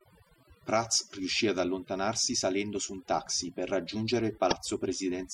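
Overdone noise removal runs through the whole speech clip. The noise reducer was set too aggressively, so every frequency band it judged close to its noise estimate was pushed far down or switched off. That took the background noise and the softer parts of the voice with it. The background drops away, broken by sparkling specks where isolated bands flicker on and off.

Damaged data in a compressed stream appears from 4.48 to 4.53 s, right after "un taxi per raggiungere". A short stretch of the encoded stream was corrupted, so the decoder could not read those frames correctly. It lost its place and had to hunt for the next valid frame header before resuming. The result is a brief glitch of about 44 ms.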